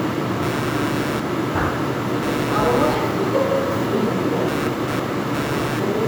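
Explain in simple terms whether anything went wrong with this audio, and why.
From 0.42 s to the end, a buzzing chirp runs under the sound. This is computer activity noise: the computer's changing workload disturbs the shared electrical ground of the audio circuit, adding a buzz that pulses around 150 times a second.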